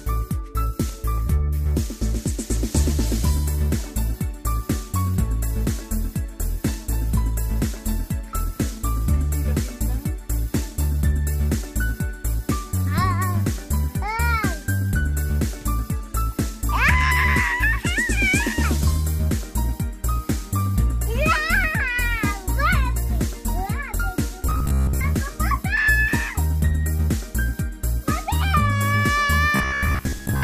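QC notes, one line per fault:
24.42–25.01 s and 29.56–30.43 s: robotic sound from repeated short buffers, twice, with the same flavour both times. The audio goes rigid and metallic, locked onto a steady buzz at about 66.7 Hz, which fits a chunk of roughly 15 ms being replayed over and over while most of the real material in those stretches gets skipped. That's likely the playback side running dry and looping its last buffer until fresh audio shows up.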